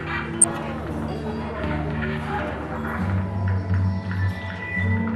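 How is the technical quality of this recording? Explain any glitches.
The technical quality is poor, with codec damage throughout and one short burst of corruption near the start.

From start to finish the audio sounds dull and granular, with a gurgling edge. This points to MP2 compression, likely at a low rate, which fits about 80 kbps. Layer II splits the signal into 32 sub-bands and, when bits run short, switches off the upper ones entirely and quantises the rest coarsely. On a spectrogram the top end is cut off in blocky steps that flicker from frame to frame.

From 0.41 to 0.51 s there is DAB burbling, a brief burst of corruption over the sound. Bit errors from weak reception slipped past error correction into the MP2 data, and corrupted samples put short blips of noise into individual sub-bands. This fits a modest error rate of a few tenths of a percent. On a spectrogram it shows as isolated bright rectangular patches in single bands.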